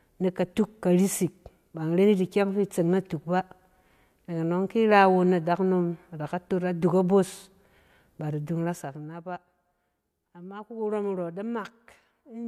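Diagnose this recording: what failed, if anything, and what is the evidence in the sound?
Zipper noise appears in the gain stage of the software processing. Just after "ba da", from 8.48 to 9.25 s, a fast ticking rides on the speech as the level falls by around 15 dB. The gain moves in unsmoothed steps, roughly thirty per second.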